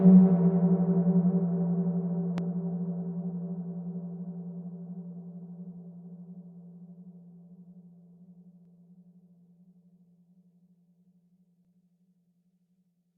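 At 2.38 to 2.41 s a loud pop, likely from a voltage pulse such as a switch or static discharge, stands roughly 10 dB above the sound: a single spike on the waveform, a full-height vertical stripe on the spectrogram.

At 8.65 s and 11.65 s an overlap between stream segments drops a sliver of audio, leaving a tiny skip. The waveform shows an abrupt step, and the spacing fits 1-second segments.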